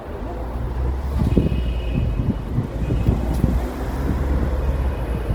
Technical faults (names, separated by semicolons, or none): Opus compression